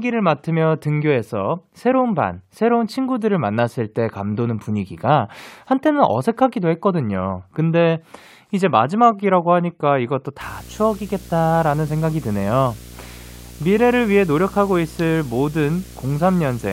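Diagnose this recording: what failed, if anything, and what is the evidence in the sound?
Video or display buzz enters in the analogue wiring at 10.41 s and runs to the end of the speech clip. It is a 60 Hz field-rate buzz with hash above it, roughly 20 dB below the speech. A nearby screen or video cable is coupling its picture signal into the audio line.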